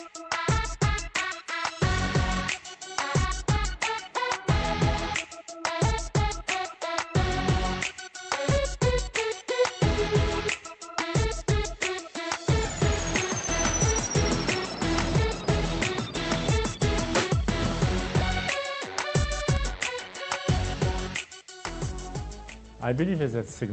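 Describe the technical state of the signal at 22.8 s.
At 22.8 s the signal is intact, with nothing beyond the ordinary character of the call codec it travelled through.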